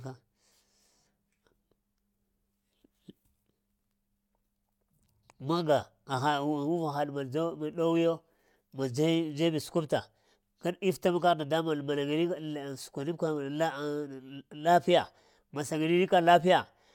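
Listening to this speech recording, nothing stood out as a technical problem at any point.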